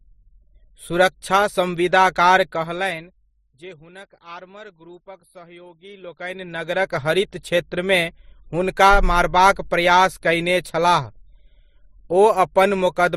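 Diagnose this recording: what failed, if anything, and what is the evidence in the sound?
Transcoding between lossy codecs, throughout: nothing above 15.7 kHz and mixed codec artefacts, likely from an MP3 stage re-encoded to Opus at the codec stage.

Zipper noise, 2.37–3.78 s and 5.80–7.01 s: the level falls, then rises, by about 25 dB in unsmoothed steps, around 200 a second, ticking audibly.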